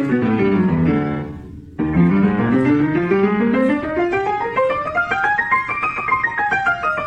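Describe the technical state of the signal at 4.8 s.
A brief glitch cuts through the sound from 4.83 to 4.89 s, a little under 60 ms of disruption that has nothing to do with the surrounding audio. This is damaged data in a compressed stream: some of the encoded bytes at that point are corrupt, so the decoder misreads or discards those frames, loses its place in the bitstream, and searches until it finds the next valid frame header and resumes clean decoding.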